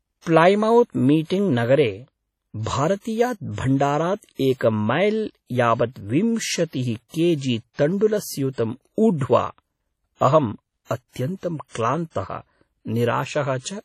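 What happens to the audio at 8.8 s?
At 8.8 s the speech carries the same heavy WMA compression damage heard across the whole clip: smeared, ringing transients and a hiss that swells with the signal. Nothing survives above 15.3 kHz. The coarse quantisation fits a bitrate around 32 kbps, likely from this encoder.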